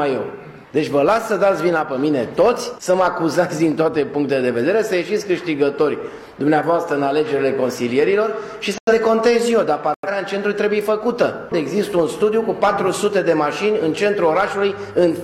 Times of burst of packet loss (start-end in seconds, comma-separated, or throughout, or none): none